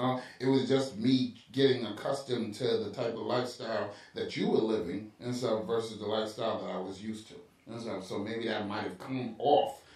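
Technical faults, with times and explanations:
No technical faults can be heard in this speech.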